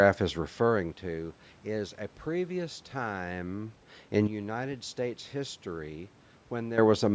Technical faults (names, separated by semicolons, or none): sudden gain jump